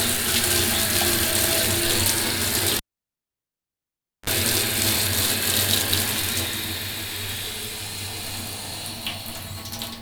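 A live cable is pulled and plugged in between 2.77 and 4.30 s: a pop cuts the sound to near silence for about 1.48 s, then a brief 40 ms burst of 50 Hz mains buzz as the tip touches, and another pop restores it.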